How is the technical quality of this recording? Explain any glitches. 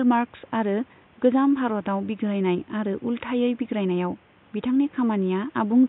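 The technical quality of the recording is sound, with no glitches to explain, and the faint room noise sits about 33 dB below the speech.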